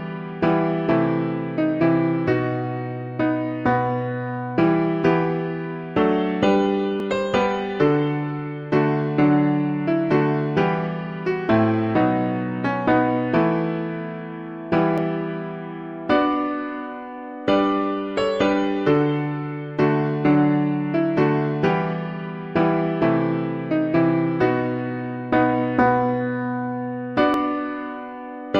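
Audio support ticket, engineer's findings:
Likely dropped buffer (overrun): capture side not draining input before hardware overwrote it, roughly 10 ms lost each time and the remaining audio spliced end to end. Audible as the sound jumping ahead, no gap, at 7.00 s, 14.98 s and 27.34 s.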